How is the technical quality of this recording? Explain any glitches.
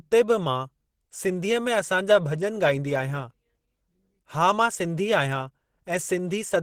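The technical quality is limited by plainly audible Opus compression across the whole clip. Throughout, the speech sounds hoarse, muffled and grainy, with a rough, noisy texture. This is likely low-bitrate Opus in its hybrid speech mode, which fits a rate around 16 kbps. In that mode a speech coder handles the lower band, while the upper band is rebuilt coarsely from band energies, so the top sounds noisy rather than detailed even though content reaches about 20.2 kHz.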